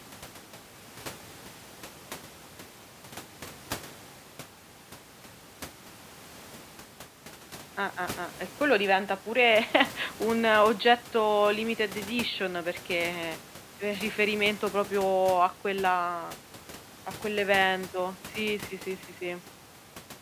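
No technical faults are present.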